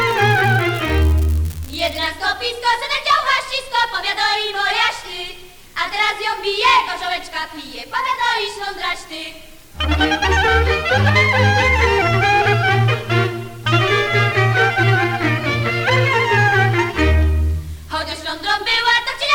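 From the start to 2.06 s a steady crackling fizz sits over the sound, continuing through quiet moments. This is an unreliable data bit: one marginal data line flips its bit in random samples, each error a same-sized spike of about -12 dBFS.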